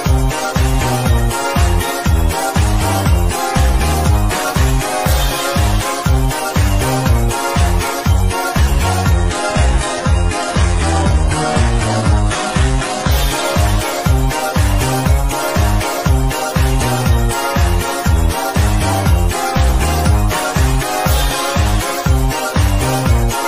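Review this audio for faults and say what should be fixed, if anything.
From 9.12 to 13.12 s the stream drops to a lower-bitrate version, an adaptive stream falling back when the connection slowed. Everything above 11.4 kHz disappears, and the top end sounds thinner, with more codec smearing. It fits a switch from roughly 96 kbit/s AAC-LC down to a 12 kbit/s HE-AAC rendition. Quality changes abruptly at both edges with no gap, then recovers. To prevent it, give the player a deeper buffer and a less aggressive downswitch rule so short throughput dips don't force the lowest rung.

At 11.11 s there's a block of digital silence lasting about 0.73 ms, which fits a 32-sample block that went out as zeros. The audio snaps to silence and back with no fade, so it's heard as a small tick rather than a gap. It falls inside the low-bitrate stretch, and most likely the output buffer was not filled in time. 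To prevent it, make sure the decode and output path always fills the buffer in time, or crossfades instead of writing zeros.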